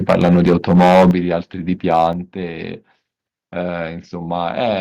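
From 0.09 to 1.11 s the speech is harsh and crackling on every loud syllable, which is likely microphone overload: the input is driven roughly 12 dB past the converter's ceiling, so around a tenth of the samples are flattened. On a waveform the peaks sit as flat plateaus, and a spectrogram shows broadband smearing up through the kHz range at each clipped burst.

At 0.11 s the level drops suddenly by about 2 dB, voice and background together. At 1.11 s, right as the overload ends, it drops again by about 8 dB. This is likely the call software stepping the microphone volume down in response to the clipping. Each step appears on the waveform as an abrupt shrink in the envelope, and on the spectrogram as a vertical edge where every band dims at once.

From 1.91 to 2.07 s a milder, likely microphone overload returns, about 3 dB over the limit, with only a small fraction of samples clipped. It sounds like a brief gritty edge on the loudest moment, with a few short flat-topped peaks in the waveform.

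At 2.13 s a third, likely microphone volume step down, this one about 5 dB, follows right after that distorted peak. It shows as another sharp, uniform fall in level across the whole spectrum.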